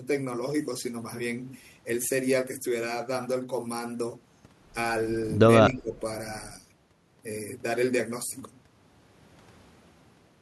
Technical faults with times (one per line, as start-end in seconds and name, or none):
5.59-5.98 speech suppressed in double talk